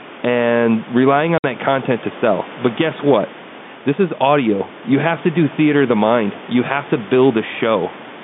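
At 1.38 s, right after "and relying", the speech drops out for 60 ms until 1.44 s, resuming with "that content to sell". This is packet loss filled with silence: the receiver lost packets and played nothing in their place. The gap fits three 20 ms packets. It sounds like a brief hole with hard edges. The waveform shows a flat line with abrupt cut-offs, and the spectrogram a blank vertical strip.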